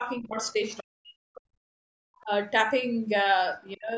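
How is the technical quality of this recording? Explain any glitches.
The recording has repeated dips in the speech and one short burst of a second voice, both pointing to trouble in a call's echo cancellation. The audio carries nothing above 8 kHz.

Speech suppressed in double talk: the voice sinks from 0.0 to 0.62 s, then much more deeply from 0.8 to 1.8 s, where it drops by roughly 40 dB to near silence. It dips again briefly at 2.23 to 2.29 s, and from 3.63 s to the end. The likely cause is an echo canceller that couldn't separate the talker from the loudspeaker echo while both sides spoke, so it turned both down.

Other side's voice leaking through: between 0.7 and 0.8 s, a faint second voice about 20 dB below the talker slips in. The far side was playing on a loudspeaker, and the echo canceller likely failed to remove all of it from the microphone.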